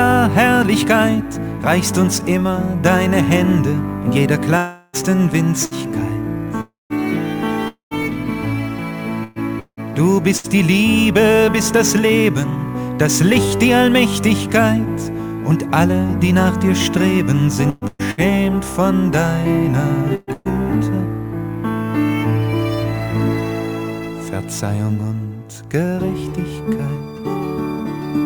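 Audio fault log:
4.57–4.96 s, 6.61–6.93 s, 7.68–7.94 s: long network dropout. Each 0.26–0.39 s hole is bridged by a fading continuation of the last sound. The last two sink to silence. This is longer than a burst and likely a stalled connection.
5.65–5.74 s: burst of packet loss. About 60 ms is missing and is covered by a brief fading continuation of the last sound. The sound then resumes further on, too short to count as a dropout.
8.03–10.47 s: repeated packet loss (robotic sound). Four gaps, the longest 175 ms, conceal about 15% of the stretch. This gives a choppy stutter rather than one clean gap.
17.70–18.20 s: repeated packet loss (robotic sound). Three gaps of up to 117 ms conceal nearly 60% of this half second, so the sound turns heavily choppy with pieces missing.
20.15–20.30 s and 20.33–20.48 s: burst of packet loss. These are two 120 ms holes, each patched by a fading held continuation. 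About 30 ms of real audio separates them, unlike a sustained robotic run.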